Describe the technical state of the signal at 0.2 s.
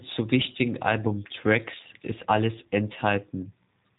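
At 0.2 s the speech is already carrying G.729 codec damage, which runs through the whole clip. The sound is rebuilt from a vocal tract model, pitch prediction and a few pulses per frame, consistent with an 8 kbit/s stream, so it comes across rough and synthetic, with nothing above 3.8 kHz.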